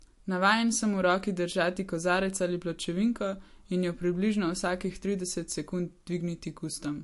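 Likely MP3 compression throughout, at a bitrate starved enough to fit roughly 53 kbps, removed all content above 11.3 kHz and dropped weak frequency detail unevenly from frame to frame, leaving the speech dull at the top with plainly audible watery, swirling artefacts and blurred consonant onsets.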